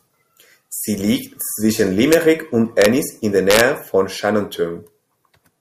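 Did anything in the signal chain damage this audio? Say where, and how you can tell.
Yes: integer overflow in the sample-format conversion or a fixed-point gain stage, where samples beyond full scale wrapped around to the opposite sign instead of being clamped. Loud peaks in the speech exceed the limit by only about 0 to 1 dB, yet each one flips across the whole range, producing violent cracks far harsher than clipping. They occur at 2.13 s, from 2.82 to 2.86 s, and from 3.51 to 3.61 s.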